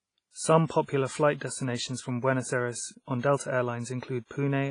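Heavy transform coding runs through the whole speech recording, most likely WMA compression at a low bitrate, which fits something around 24 kbps. Nothing survives above about 10.1 kHz, and the coarse quantisation leaves a ringing, washy hiss that swells and fades with the voice.

The same block-based coding causes pre-echo from 0.66 to 0.70 s, just before "popular flight destinations from". Noise meant for the loud attack spreads about 41 ms into the quiet ahead of it, so a short hiss precedes a blunted onset. It happens again from 3.21 to 3.23 s, with a shorter 27 ms smear.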